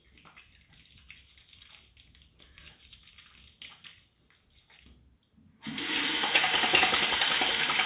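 Nothing stood out as a technical problem on listening to these everyday sounds.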